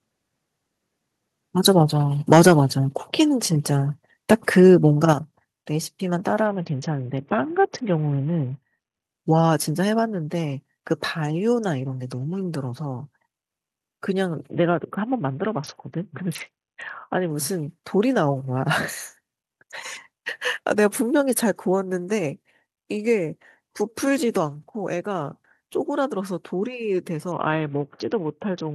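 From 2.32 to 2.52 s the loudest peaks are flattened and crackle harshly. This is likely microphone overload, with input about 8 dB past the converter's limit.

At 2.48 s the whole level drops suddenly by about 3 dB. At 5.13 s it drops again by about 7 dB. Both are likely the microphone volume being stepped down after clipping.

From 6.47 to 9.03 s, 14.50 to 17.30 s, and 27.32 s to the end, treble dulls and gritty noise rises. This is a Bluetooth SBC bit pool drop. It fits a bit pool cut from 28 to 6, around 60 kbps.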